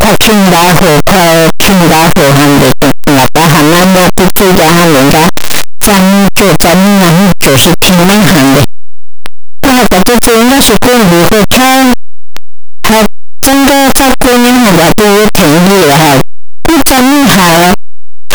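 The clip is speech, and it is badly distorted from start to finish. The sound is very loud and harsh throughout. Quiet stretches come out as loud as the rest. Every zero crossing turns into a jump across the full range. This points to signed and unsigned samples mixed up, which is the likely cause. With 8-bit samples, flipping the top bit shifts each value by half the range.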